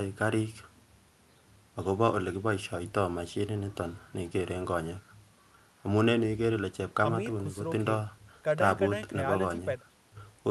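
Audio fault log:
No faults are heard in this speech clip. It comes through a WebRTC call path working as expected, with the Opus codec's usual coding noise and its top end limited to 12 kHz.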